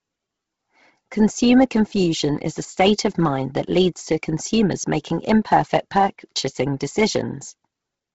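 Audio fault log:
throughout Bluetooth LC3 compression: the speech has nothing above 7.7 kHz, and its upper band turns breathy and grainy where detail is replaced by filler noise. This heavy damage is likely LC3 at a low rate, around 16 kbps; plain low-pass filtering leaves no grain.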